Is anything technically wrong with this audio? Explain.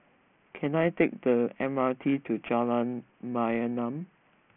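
Yes. There's aliasing throughout the speech. It looks like it was taken from 16 kHz down to 6 kHz with no anti-alias filter, so anything above 3 kHz folded back as wrong pitches, roughly 20 dB down. The sibilants end up gritty and metallic, with energy piled right up to the 3 kHz edge.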